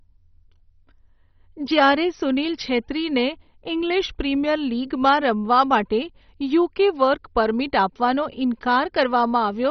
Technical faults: MP2 compression

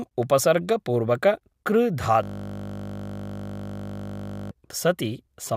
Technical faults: system hang loop

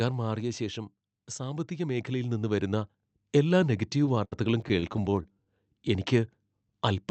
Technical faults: automatic gain falling; automatic gain rising; repeated stalls (stutter)

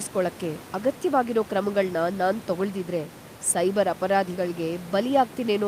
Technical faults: none

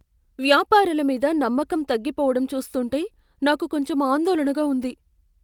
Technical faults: none

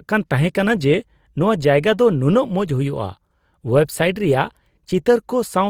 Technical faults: Opus compression

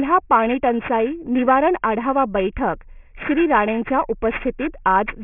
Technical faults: aliasing

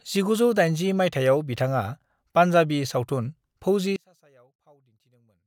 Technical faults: one channel inverted

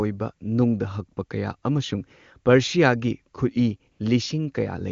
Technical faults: AMR comfort noise

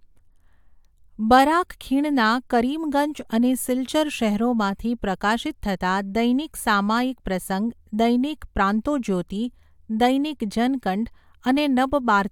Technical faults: none

